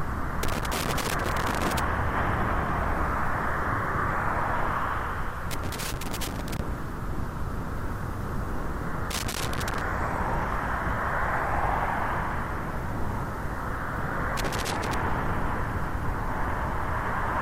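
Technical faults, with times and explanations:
0.43–1.79 s, 5.51–6.59 s, 9.11–9.81 s, 14.37–14.94 s: loose connector crackle. A worn or dirty contact in the signal path keeps making and breaking as it shifts, chopping the signal into fragments, so each burst comes through as irregular scratchy crackle lasting from about half a second to over a second.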